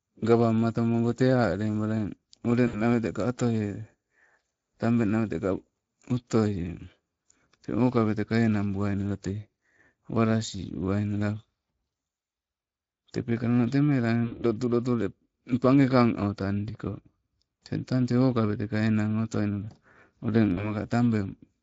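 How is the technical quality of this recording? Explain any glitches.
The technical quality is compromised by a low-quality Speex codec throughout and three short dropouts.

The Speex codec here is running at a setting that points to a rate of around 20 kbps. The speech comes out plainly degraded: noisy and hoarse.

VoIP packet loss concealed by the speech codec occurs at 2.67 to 2.82 s, 14.25 to 14.45 s and 20.53 to 20.73 s. About 60, 60 and 40 ms of audio went missing, and the decoder stretched its last pitch and filter with falling gain. Each gap becomes a fading buzzy tone or coloured noise, and the speech stays weak briefly afterwards.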